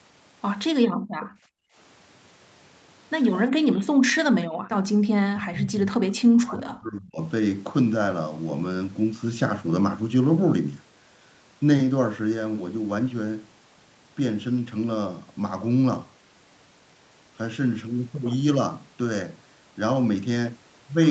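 From 0.89 to 1.75 s, the background is gated by the echo canceller. The room sound drops by about 35 dB while the far end plays, then returns. From 3.83 to 4.38 s, the talker's speech dips hard, by around 40 dB. This is likely speech suppressed in double talk, with the canceller mistaking the talker for echo. From 4.66 to 4.98 s, the background gates again, falling about 37 dB. From 5.26 to 7.21 s, the same double-talk suppression likely returns. The speech is pushed down for about two seconds.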